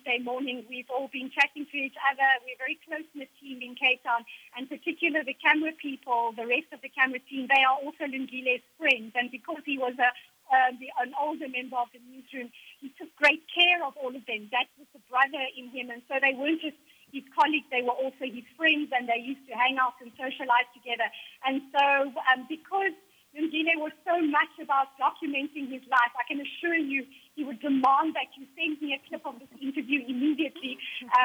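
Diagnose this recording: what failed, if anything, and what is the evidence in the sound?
The fault is low bit depth with dither, introduced at sample-format conversion. A constant, even hiss sits under the sound from start to finish. It sits roughly 40 dB below the signal. It does not pump, crackle or change with level, and there is no gritty distortion on quiet passages. That fits a reduction to 10 bits with dither added before rounding. The dither turns the rounding error into steady white noise rather than distortion.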